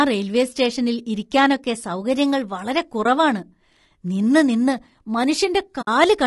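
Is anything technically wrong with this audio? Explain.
Yes, two problems are audible.

Throughout the speech, the encoding likely went through low-delay AAC compression (AAC-ELD) at a low rate, around 32 kbps. At this low rate too few bits remain to code the pitch harmonics cleanly. The damage is plainly audible: the voice sounds rough and grainy, noise fills the gaps between harmonics, and the upper band sounds thinned and artificial.

AAC frame loss with muting occurs twice, from 3.03 to 3.06 s and from 5.81 to 5.88 s. Compressed frames went missing, and the decoder replaced their content with silence. The first gap fits one lost 20 ms frame and the second fits three, about 60 ms. The overlapping transform windows fade the sound out and back in, so the first dropout is a brief dip and the second a soft-edged hole.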